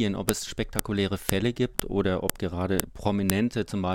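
Half-second WAV pieces of this speech were joined with their headers intact, so file header played as audio gives sharp, loud snaps at 0.29, 0.79, 1.29, 1.80, 2.30, 2.80 and 3.30 s.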